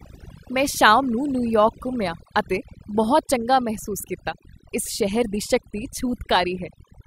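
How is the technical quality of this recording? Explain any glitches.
The recording has one clear problem, present for its whole length: overdone noise removal. Noise reduction applied too aggressively switched individual frequency bands down whenever they resembled the estimated noise, removing quiet speech detail too. The gaps between phrases drop to near silence with twinkling specks. Unlike simple gating or muffling, the artefacts flicker within the sound itself.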